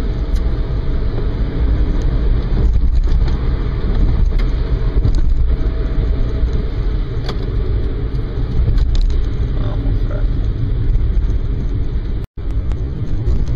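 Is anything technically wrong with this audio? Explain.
No, nothing is technically wrong with this audio.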